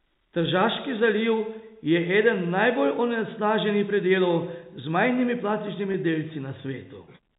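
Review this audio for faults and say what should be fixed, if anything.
At 5.92 to 5.94 s, packet loss with pitch repetition: a 20 ms gap, consistent with one lost packet, is concealed by repeating the last pitch period, producing a brief held, buzzy sound. Forward error correction or a slightly deeper jitter buffer would prevent it.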